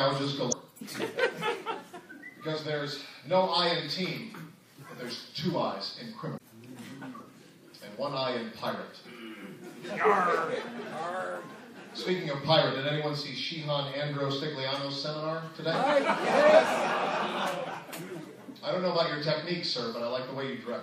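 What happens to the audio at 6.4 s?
Between 6.36 and 6.39 s, a short stretch of the compressed stream carries damaged data. The decoder reaches bytes that no longer parse as valid frames, discards or misreads them, loses its place, and has to hunt forward for the next frame header before it can resume. In the sound this is a brief squawk or blip about 26 ms long, with the audio picking up again a moment later.

Under that glitch, and across the whole clip, weak high-frequency detail flickers in and out from frame to frame, giving a watery, swirling texture, metallic chirps on sibilant or bright transients, and smeared attacks. The likely cause is MP3 compression at a low bitrate, 64 kbps, with the damage plainly audible. The encoder runs short of bits and spends them only where its hearing model says they matter most, dropping the rest.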